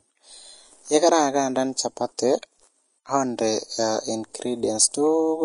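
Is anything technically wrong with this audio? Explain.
Yes. Throughout the speech there is plainly audible codec damage, likely from Vorbis compression at a low rate, consistent with roughly 33 kbps. Nothing survives above 10.6 kHz, and the treble that remains is quantised so coarsely that detail turns to hissy, grainy noise, roughening tones and softening consonant attacks.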